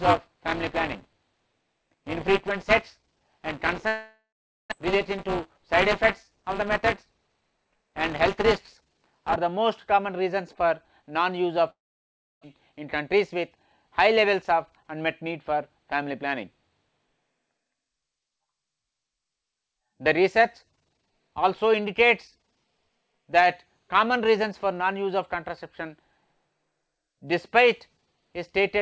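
From the start to 9.36 s a steady robotic rattle at 200 Hz rides on the sound. This is buffer tearing. The writer and reader of the playback ring buffer have slipped, so in every period roughly a sixth of the buffer replays audio about 15 ms old, with hard joins on both sides. It differs from codec grit because the buzz stays locked to one rate and disappears whenever the signal stops.

At 3.88 s the sound smears into a fading buzz, then thins to near silence for about 440 ms, and resumes at 4.74 s with roughly 600 ms of material simply gone. The same thing happens from 11.70 to 12.45 s, with about 660 ms of quiet after the concealment. Each is most likely a long network dropout, with the receiver filling the gap itself. Unlike a brief packet loss, the fill gives up after a few tenths of a second, and the playback delay shifts by a couple of tenths of a second around the first gap and by about a tenth around the second.

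Right after each gap the audio hurries without any change in pitch, which separates it from a resampling error. This is jitter buffer speed-up, in which the receiver trims pitch-period slices to drain excess delay. It runs at 105% from 4.86 to 5.76 s, at 107% from 6.31 to 8.41 s, and at 109% from 12.53 to 13.57 s, cutting roughly 50, 150 and 100 ms of audio. Throughout the clip there is nothing above 8 kHz, which fits a wideband call codec such as G.722.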